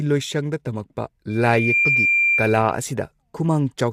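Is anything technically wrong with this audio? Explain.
Yes, two faults. Throughout, the speech sounds rough and grainy, with a hiss-like fill between the harmonics and a thin, somewhat artificial top end. That points to low-delay AAC compression, likely AAC-ELD at a low bitrate around 32 kbps, whose short frames resolve pitch harmonics poorly.

From 1.29 s to 2.85 s a loudspeaker feedback squeal appears: a single 2.4 kHz tone swells over about half a second and then sits a few dB above the speech. A microphone is picking up its own loudspeaker, and at that frequency the loop gain exceeds one.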